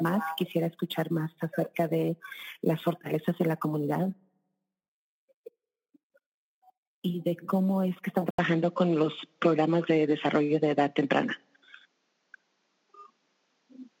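At 8.3 s the input likely switched to a poorer device; after an 80 ms gap, the sound loses everything above 7.6 kHz, shifts level by about 5 dB, and gains faint new background noise.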